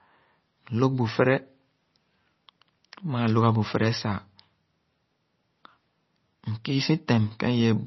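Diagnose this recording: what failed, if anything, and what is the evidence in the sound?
The codec stage is at fault, with damage running through the whole recording: the speech has nothing above 5.9 kHz, so s sounds lose their edge, and the band that remains has a watery, swirling texture. That points to heavy MP3 compression, likely at a bitrate around 24 kbps. Starved of bits, the encoder drops the treble at a fixed cut-off and zeroes quieter frequency lines, which flicker on and off between frames and blur consonant onsets.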